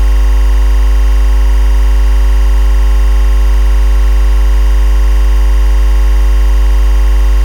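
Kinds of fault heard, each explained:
timecode bleed: Linear timecode running at 24 frames per second leaks from an adjacent track or cable into the audio path, so a square-wave chirp flipping between roughly 1 kHz and 2 kHz warbles steadily behind the sound, sitting well below it throughout.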